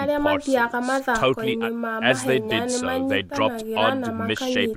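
No technical faults can be heard anywhere in the speech. Nothing in the audio stands out as a problem at any point.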